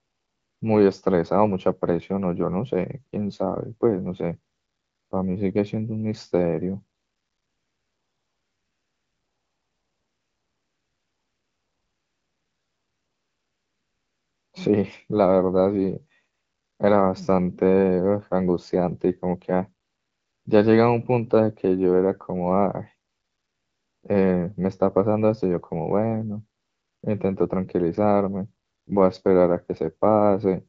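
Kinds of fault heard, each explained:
AMR comfort noise: In the pauses, the phone decided nobody was talking, stopped sending speech, and the far end filled the gap with smooth, synthetic hiss built from a rough sketch of the background. You can hear that even noise switch in at 0 to 0.61, 4.53 to 5.11, 6.97 to 14.53 (the long 7.6 s stretch), 16.33 to 16.79, 19.85 to 20.45, 23.09 to 24.03, 26.59 to 27.03 and 28.65 to 28.87 s.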